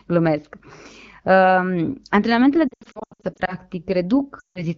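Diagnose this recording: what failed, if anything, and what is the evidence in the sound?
Speech stutters from 2.68 to 3.55 s as a chain of short warbles and dips, with 420 ms of sound missing across 0.8 s and the longest gap 80 ms. A second break from 4.39 to 4.67 s loses 160 ms. These are lost AMR speech frames on the network link. Corrupted frames were discarded, and the AMR-WB decoder, running clearly at 12.65 kbit/s, filled the gaps by repeating its last good pitch and vocal tract settings at falling gain.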